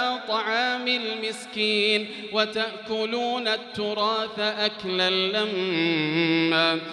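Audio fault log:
Nothing to log here; I listened all the way and didn't hear anything go wrong with the sound.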